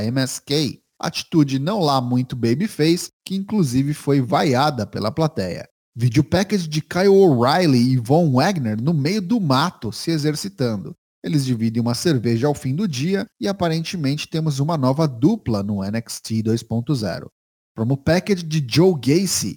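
Crude rate conversion runs the whole way through. Samples were simply repeated, which fits a 44.1 kHz to 48 kHz jump, leaving an inharmonic fizz roughly 30 dB under the speech.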